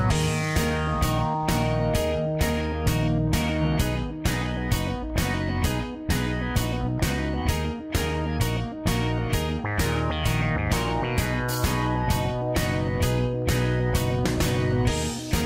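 No technical faults can be heard anywhere in this clip.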